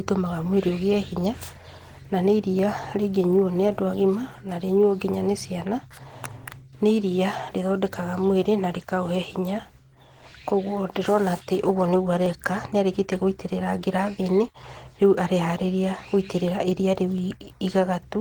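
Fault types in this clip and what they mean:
Opus voice compression: Throughout the clip, the speech has been coded by Opus at 16 kbps in hybrid mode, with linear-prediction coding handling the range below 8 kHz and a transform layer covering the top, so energy still reaches about 20 kHz. At this rate the excitation is coded coarsely, and the damage is plainly audible as hoarse, slightly robotic speech. On a spectrogram the upper band looks patchy and smeared, with 20 ms frame structure showing in the fine detail.
dropped samples: Five sharp clicks occur, at 1.34, 2.59, 11.27, 12.26 and 17.18 s. Each is likely caused by a tiny run of missing samples, well under a millisecond, which makes the waveform jump abruptly from one value to a later one. No sound is audibly lost. On a waveform each shows as a single discontinuity, and on a spectrogram as a thin vertical line spanning the frequency range.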